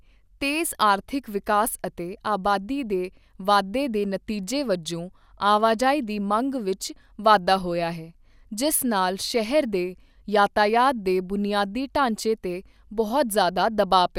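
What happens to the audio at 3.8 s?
Nothing goes wrong at 3.8 s: the speech there plays through intact, with no dropout, click, glitch or other fault at that moment.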